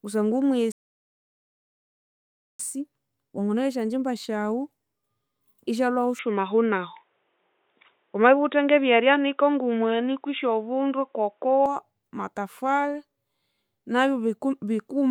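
At 0.72 s the player runs out of downloaded audio and halts, a rebuffering stall. The speech drops to silence until 2.60 s, then picks up exactly where it stopped, so nothing is missing but nearly 1.9 s of dead air is added.

From 6.19 s to 11.66 s the speech turns dull and boxy, with nothing above 3.8 kHz. The likely cause is an input switched to a poorer device. There is no gap at the switch, the level shifts by around 5 dB, and a faint new noise floor sits far below the speech.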